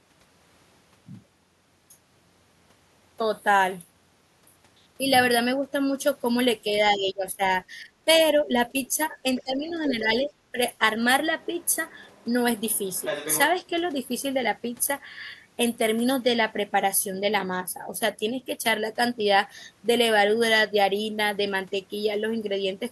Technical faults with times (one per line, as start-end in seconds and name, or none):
6.91-7.41 speech suppressed in double talk
7.76-8.08 speech suppressed in double talk
8.45-8.96 speech suppressed in double talk
9.37-9.94 other side's voice leaking through
9.43-10.81 speech suppressed in double talk
11.41-12.25 other side's voice leaking through
12.73-13.39 other side's voice leaking through